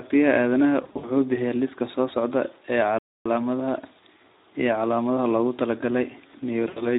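A speech clip carrying plainly audible Speex codec damage throughout. At about 11 kbps the CELP coder has too few bits for the excitation, so the voice sounds hoarse and noisy, and a spectrogram shows grainy, poorly defined harmonics rather than clean stripes. VoIP packet loss concealed by the speech codec occurs twice. From 0.83 to 1.11 s, about 140 ms of audio is missing in scattered gaps, the longest 60 ms, and the decoder stretches its last pitch and filter into a buzzy tone or coloured noise that fades. Near the clip's end, from 6.68 to 6.83 s, roughly 80 ms goes the same way. On a spectrogram these spans appear as smeared, repeated harmonics that fade out. A playback stall cuts the sound dead from 2.99 to 3.26 s, about 270 ms, likely because the player ran out of data or was blocked, and the waveform is flat for that stretch.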